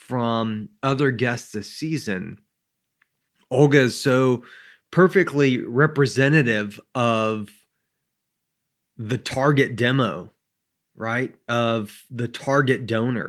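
No dropouts, clipping, glitches or other technical faults turn up anywhere in the recording.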